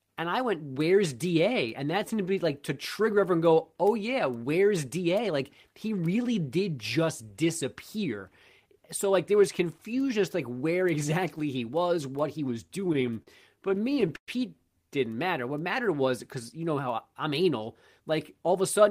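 Late packets ran the jitter buffer dry eighteen times from 12.67 to 14.29 s, after "was what he was". These repeated stalls (stutter), filled with held sound up to 118 ms, make the speech drag.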